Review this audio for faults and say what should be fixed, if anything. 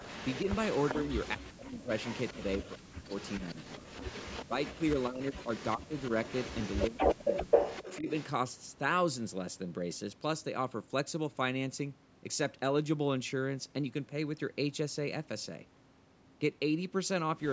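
A faint, delayed second copy of the speech trails the talker from 0.0 to 1.3 s, then again, more strongly, from 1.98 to 8.26 s. It lags by 394 ms and sits roughly 15 dB below the speech at first, then nearer 10 dB below. This is an echo leak, likely from a loudspeaker at the far end whose echo canceller let part of the playback reach its microphone and sent it back. To prevent it, the far end should use a headset or a better-tuned echo canceller.

The loudspeaker-side talker's speech sinks in three stretches: 0.45 to 3.9 s, 4.48 to 6.11 s and 6.9 to 8.08 s. It is pulled down by as much as about 40 dB in the first and last stretches and about 25 dB in the middle one. This is speech suppressed in double talk. The echo leak is playing at the same time, which points to the likely cause. The canceller could not tell the live talker from the returning echo and attenuated both. To prevent it, remove the echo at its source and use a canceller with proper double-talk detection.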